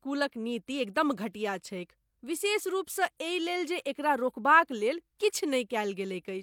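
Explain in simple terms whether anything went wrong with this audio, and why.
Nothing went wrong here: no technical fault turns up anywhere in the speech recording.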